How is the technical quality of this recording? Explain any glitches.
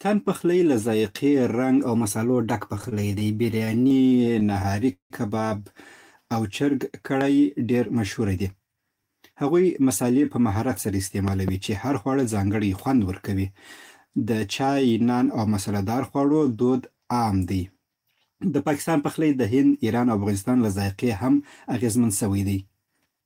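The speech is marred by three kinds of glitch: one stuttering stretch, two loud pop events, and three brief hurried passages.

Repeated stalls (stutter), 2.75 to 5.12 s: the speech drags and catches in 27 small hitches, the longest near 176 ms. Packets arrived late, so the jitter buffer kept running dry. The receiver stretched the last sound to bridge each wait, filling about 450 ms in total. Nothing is lost, but the speech stutters.

Loud pop, at 7.21 s and again between 11.28 and 11.51 s: a sharp single pop about 15 dB above the speech, then a double pop about 10 dB above it, with the speech continuing underneath. This is likely a voltage spike from a plug, switch, static discharge or driver glitch.

Jitter buffer speed-up, 7.68 to 8.97 s, 19.84 to 20.49 s and 22.87 to 23.21 s: the speech runs about 9 to 11 percent fast at unchanged pitch and sounds rushed. After a backlog built up, the receiver trimmed many tiny pitch-period slices, roughly 150 ms, 70 ms and 40 ms in total.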